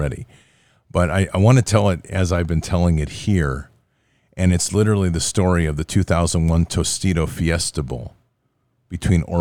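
A speech recording, with nothing technically wrong with it.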